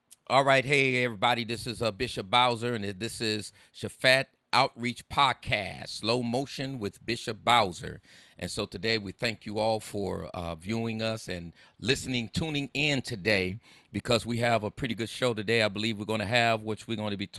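Nothing stood out on listening to this speech recording.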